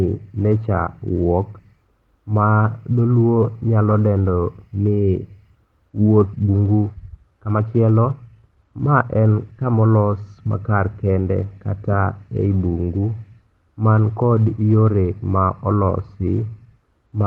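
At 6.33 to 6.35 s a skip ahead drops about a second of speech without any fill, so playback jumps forward and the two sides join almost directly. From 6.43 to 9.74 s a jitter buffer speed-up trims short pitch-period pieces, about half a second in total, so the speech runs at 118% with unchanged pitch and sounds hurried until just before "olos makar kende kata".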